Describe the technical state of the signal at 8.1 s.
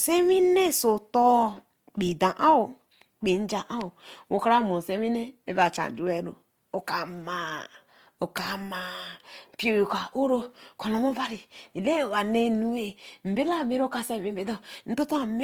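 At 8.1 s the speech carries Opus compression, present from start to end rather than at that moment alone. The grainy, rough texture over voiced sounds likely comes from the music-style transform mode at a low rate, which fits roughly 24 kbps, where starved bands are filled with folded or noisy content. A spectrogram shows bands reaching to about 20.3 kHz but with smeared, noise-like harmonics instead of clean lines. The waveform looks largely ordinary.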